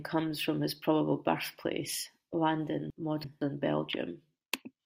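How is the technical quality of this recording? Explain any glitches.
The recording has one clear glitch, a case of chunks out of order between 2.90 and 3.41 s. A block of audio about 0.17 s long was delivered or written late and ended up playing two chunks after its proper place, behind the two blocks that should have followed it. Nothing is missing, but the half second of speech is shuffled, with three hard joins where mismatched waveforms meet. It comes across as a brief jumbled, garbled stretch.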